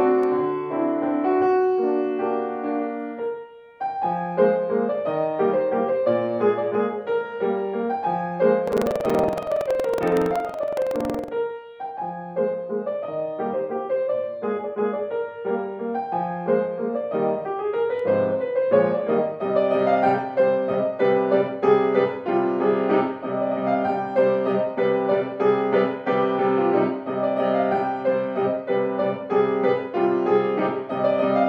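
From 8.64 to 11.29 s there is buffer tearing: writer and reader have slipped, so a small slice of each buffer holds audio about a tenth of a second stale. This produces a rattling 21.5 Hz buzz, which fits a 2048-sample buffer. The waveform shows evenly spaced hard joins, and the spectrogram shows matching vertical stripes.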